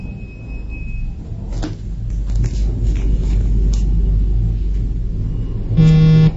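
Throughout, the audio has a hard ceiling at 7.6 kHz and a watery, swirling texture with smeared attacks, likely MP3 compression at a bitrate near 32 kbps. A spectrogram shows a flat cut-off with flickering gaps below it where weak frequency lines drop out frame to frame.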